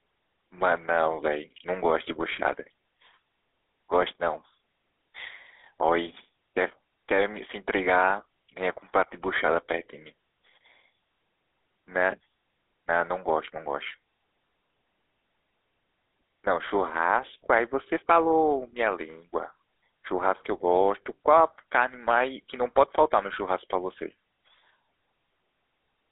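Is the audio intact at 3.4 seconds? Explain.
No. At 3.4 s, as across the whole clip, the speech has passed through a GSM full-rate codec. The vocal tract is modelled and driven by sparse, regularly spaced pulses, which gives a buzzy, gravelly roughness. The band is telephone-limited to roughly 300 Hz to 3.6 kHz, with nothing above 3.8 kHz, which fits a 13 kbps codec.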